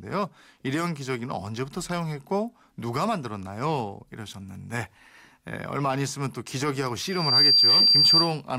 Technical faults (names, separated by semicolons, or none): loudspeaker feedback squeal